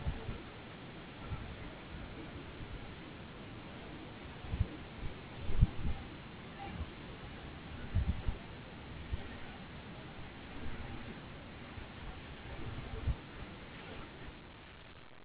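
Nothing stood out as a fault on listening to this speech recording.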